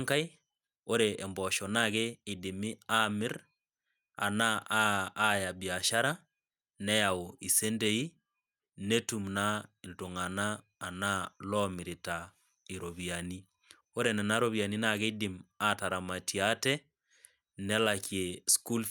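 No technical faults are audible anywhere in the recording.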